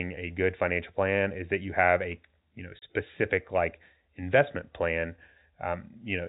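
At 2.79 s the speech drops out for about 30 ms, to 2.82 s: packet loss filled with silence. A block of audio never reached the receiver, and instead of concealing the gap it played digital silence in its place. The hole's length fits a single lost packet. Both edges are abrupt, so the cut is heard as a short hard-edged gap in the narrowband G.711 telephone sound, which carries nothing above 4 kHz.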